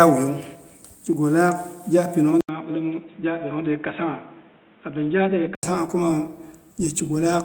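At 2.41 s the speech drops out for about 80 ms, then returns dull and boxy, about 5 dB quieter, with nothing above 3.8 kHz and a faint new background noise, until it clears at 5.63 s. This is likely the input switched to a poorer device.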